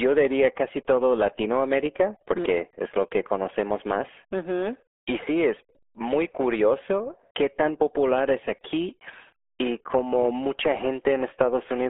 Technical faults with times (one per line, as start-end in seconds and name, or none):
0.00-11.89 RealAudio 14.4 codec